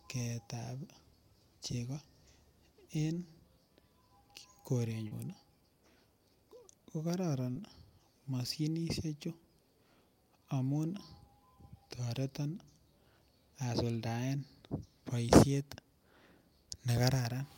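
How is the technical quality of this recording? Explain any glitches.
Two brief glitches affect this speech recording, both short concealed packet loss. At 5.07–5.13 s and 7.51–7.57 s, about 40 ms failed to arrive in time, and the decoder extended the preceding sound to cover the gap. Each is heard as a quick smear, and a spectrogram shows repeated, smoothed harmonics or featureless noise there.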